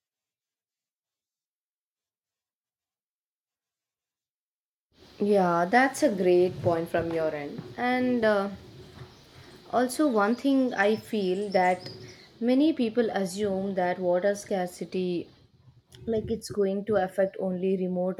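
At 13.93 to 13.95 s, compressed frames were skipped. About one frame, roughly 20 ms of speech, is missing. The audio jumps ahead by that amount.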